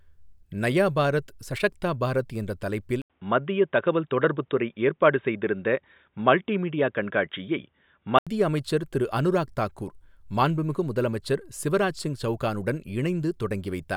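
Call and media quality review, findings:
Input switched to a poorer device, 3.02–8.27 s, after "சஷக்தா பாரத் என்ற தலைப்பில்". 80 ms gap at switch. Dull, boxy; nothing above 3.8 kHz. Level shifts a few dB. Faint new noise floor. Likely a narrowband headset call profile.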